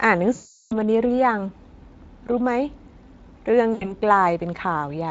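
From 0.35 to 0.79 s and again from 3.73 to 3.93 s, VoIP packet loss concealed by the speech codec: the decoder stretches the last sound into a fading buzzy tone or coloured noise, about 360 ms then 80 ms, over the light Speex coding.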